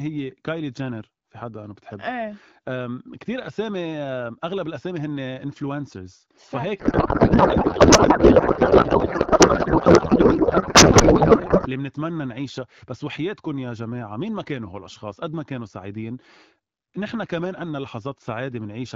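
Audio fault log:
6.80–11.68 s, codec payload misread: the speech turns to garbled warbling noise, as if octet-aligned AMR frames were being unpacked as bandwidth-efficient, scrambling every field.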